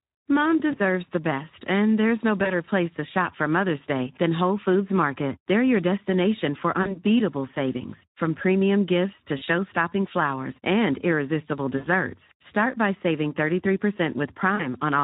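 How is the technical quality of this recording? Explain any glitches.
The technical quality is poor. Plainly audible codec coding runs through the whole clip, and it is broken by six short concealment dropouts.

Speex codec damage is plainly audible from start to finish. At around 11 kbps, this CELP coder has too few bits for the excitation, so the speech sounds hoarse and grainy. On a spectrogram, harmonics look smeared, and anything above 8 kHz is only a diffuse, noise-like haze.

VoIP packet loss concealed by the speech codec occurs at 0.71–0.79 s, 2.43–2.53 s, 6.81–7.00 s (after "your destination for", before "savings from premium gifts"), 9.37–9.43 s (after "from premium gifts to"), 11.77–11.87 s (after "flowers and irresistible"), and 14.55–14.66 s. Each gap fits one to three lost 20 ms frames. The decoder repeats its last pitch and filter at falling gain, so the speech smears into a fading buzz or coloured noise. 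On a spectrogram this shows as flat, stretched bands. The waveform shows a dip in amplitude that lingers briefly after the audio resumes.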